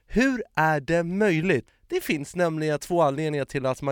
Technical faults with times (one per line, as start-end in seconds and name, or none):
none